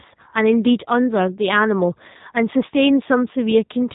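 From start to finish the speech carries the character of the G.729 codec, with plainly audible damage. Each 10 ms frame is rebuilt from a vocal tract filter, a pitch predictor and a handful of pulses rather than the original waveform, which leaves the speech rough and faintly synthetic, a signature that fits an 8 kbit/s stream. The band stops at about 3.8 kHz, so sibilants and breath sound dull and boxy.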